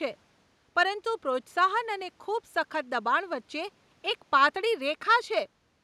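No technical fault can be heard anywhere in the speech, and the only other sound is the room's own background noise, sitting about 42 dB below the voice.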